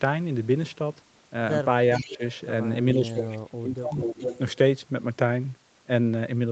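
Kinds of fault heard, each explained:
Echo leak: A delayed copy of the speech returns about 0.43 to 0.45 s after the original. This is likely loudspeaker sound the echo canceller failed to remove. It appears near 1.93, 3.14 and 3.92 s, ranging from faint to nearly as loud as the speech.
Speech suppressed in double talk: The speech dips sharply while the other side's sound overlaps. The echo canceller likely mistook the talker for echo and turned both down. The drop is about 20 dB near 2 s and about 30 dB over roughly a second from 2.95 s.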